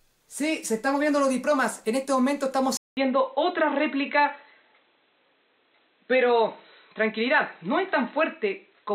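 At 2.77 s the input most likely switched to a poorer device, such as a headset's call profile or a second microphone. A gap of about 200 ms marks the change. From then until the end, nothing above 4 kHz gets through, so the sound turns dull and boxy, losing its air and sibilant detail. The level stays roughly the same, but a faint new background noise sits well below the signal.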